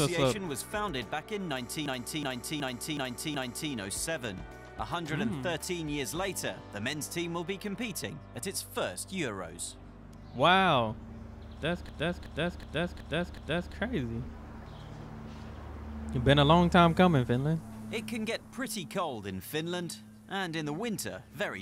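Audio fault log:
1.86–3.72 s and 11.89–13.75 s, system hang loop: Both times, a stretch of about 0.37 s repeats five times in exact copies, giving a lurching stutter at about 2.7 repeats per second before normal playback resumes with little or no audio missing. The computer or its audio driver stalled while the sound hardware kept cycling through one ring buffer, and a loop that long fits a 16384-sample buffer.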